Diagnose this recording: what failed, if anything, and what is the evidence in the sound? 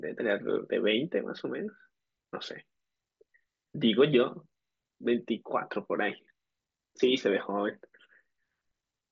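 Nothing has failed here: the speech comes over an ordinary Bluetooth mSBC headset link, which tops out around 7.7 kHz and leaves a light grain on the louder moments, exactly what that wideband headset codec does when it's working as intended.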